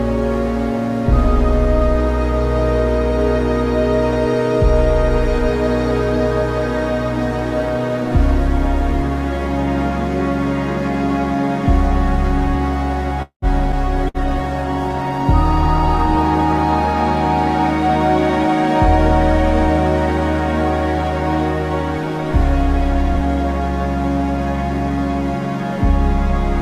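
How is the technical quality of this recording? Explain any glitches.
The recording has a cluster of glitches between about 13.2 and 19.0 s: a freeze, a jump forward, a burst of lost audio, and a stretch of degraded, low-bitrate sound.

From 13.22 to 13.45 s there is a call audio freeze. The last sound is drawn out into a held, fading tone that dies away to roughly 0.1 s of silence, and then the audio picks up exactly where it left off, so nothing is lost. The likely cause is packets held up in transit until the jitter buffer ran dry, leaving the receiver to stretch what it had. The pause adds about 0.2 s of delay to everything after it.

At 13.72 to 13.75 s the audio skips ahead. There is almost no gap, just an abrupt join, but about a tenth of a second of material is gone. A stretch of audio was dropped, in transit or by the jitter buffer, and playback jumped to newer material, stitching the two sides together almost directly.

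From 14.01 to 19.00 s there is a call bitrate drop. The sound turns coarse and muffled, with a watery, smeared quality and noticeably less top end. The connection's bandwidth estimate fell, and the encoder was pushed from 128 kbps down to 15 kbps. It held that floor for about 2.4 s before recovering. At such a low rate Opus quantises heavily and trims the high frequencies, which accounts for the dull, rough texture.

Inside that stretch, from 14.08 to 14.17 s, a burst of packet loss is audible as a short held buzz or hiss that fades before the audio resumes slightly further on. About 60 ms of audio is missing. The receiver filled roughly 59 ms by extending and attenuating the last sound, then continued from later audio, so the material in between is missing.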